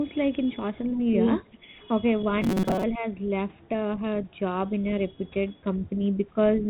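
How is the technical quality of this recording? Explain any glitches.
The recording has three short glitches in a telephone-band signal, whose light ADPCM grain and lack of anything above 4 kHz fit G.726 at 32 kbit/s.

Speech suppressed in double talk, at 1.48 to 1.81 s and again at 2.97 to 3.05 s. The echo canceller likely mistook the two sides talking together for loudspeaker echo and turned the talker down. The speech dips by about 10 dB in brief pieces, for about 0.2 s in the first stretch and under 0.1 s in the second.

Robotic sound from repeated short buffers, from 2.42 to 2.83 s. Audio likely arrived too seldom, so playback kept repeating the last buffer for most of this stretch. The repeats impose a rigid 188 Hz buzz, which fits a buffer of about 5.3 ms, and make the speech metallic while it still loosely follows the phrasing.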